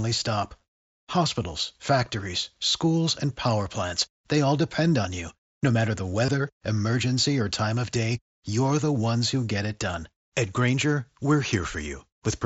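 At 1.11 s and again from 6.26 to 6.28 s there's concealed Bluetooth headset packet loss. Headset packets dropped, and the phone papered over roughly 15 and 22 ms by repeating recent waveform, giving a brief buzzy hold with a slight warble as real audio resumes.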